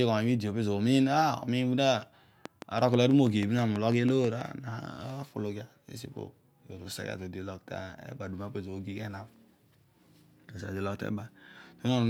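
From 2.46 s to 4.42 s, a train of clicks runs over the speech: around fifteen near-identical pulses at a regular 6.1 per second, peaking roughly 10 dB above the signal. The ticking stays audible through pauses, likely from interference or a faulty connection.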